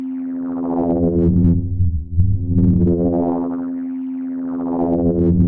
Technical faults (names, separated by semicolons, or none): none